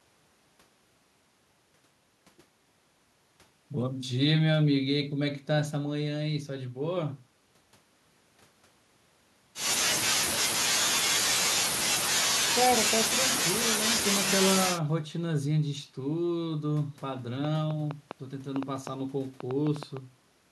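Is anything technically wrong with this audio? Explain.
Yes. A train of clicks runs from 17.45 to 19.98 s: about fifteen short pulses at roughly 4.8 per second, unevenly spaced, each jumping to around 10 dB above the speech level. The pulses share the same shape, so one repeating disturbance is the likely source, such as electrical interference from nearby equipment or a faulty connection or power supply. The result is sharp ticking and popping over the speech and in its pauses.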